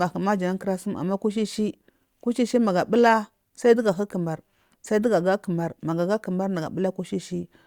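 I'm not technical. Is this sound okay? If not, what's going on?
Yes, this speech recording sounds fine. Nothing in it points to a technical problem.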